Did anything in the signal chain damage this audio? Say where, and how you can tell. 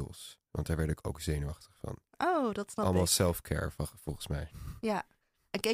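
No, nothing in this speech recording stood out on listening as a sign of damage from any stage of the signal chain.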